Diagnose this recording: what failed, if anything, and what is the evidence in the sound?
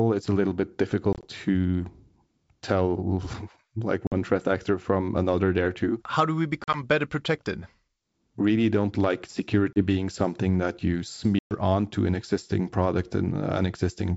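Packet loss on the ADPCM call, a network fault, leaves hard-edged silent holes at 1.13, 4.07, 6.64, 9.73 and 11.39 s. Each restart sounds slightly distorted while the decoder's predictor resynchronises.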